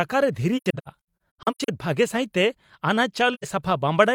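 AAC frame loss with muting strikes twice in this speech. From 0.57 to 1.69 s scattered groups of frames are lost and the decoder mutes them, so about 0.6 s of sound vanishes in a string of holes, the longest around a tenth of a second. Each gap fades out and back in smoothly through the overlapping windows. At 3.33 to 3.45 s one more soft-edged dropout of about 85 ms fits two missing frames.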